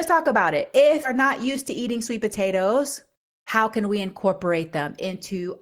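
A skip ahead at 1.03 to 1.05 s, between "talk about it" and "not used to", drops around 0.4 s of speech. Later audio was already queued, so that stretch was discarded and playback jumps straight across with no gap or fill, making the join sound abrupt.

A jitter buffer speed-up runs from 1.79 to 2.61 s, just after "not used to". The receiver had built up too much delay and trimmed short pitch-period pieces, roughly 50 ms in total. Speech plays about 6% fast at unchanged pitch and sounds slightly hurried.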